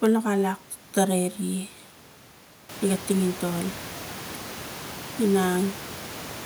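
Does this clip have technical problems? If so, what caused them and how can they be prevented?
No, nothing stood out on listening to this speech; the room's background noise rises by about 13 dB at roughly two and a half seconds but stays about 16 dB below the voice, and that is part of the recording space rather than the system.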